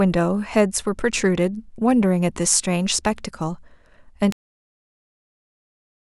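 At 4.32 s the speech just stops dead. It's a cut-off end: the final stretch of audio never got written out or played, so the recording ends partway through a sound instead of trailing off naturally. There's no decay or tail at all. It drops straight to digital silence, and that silence runs for the last 1.7 seconds or so of the file. It sounds like someone pulled the plug mid-word.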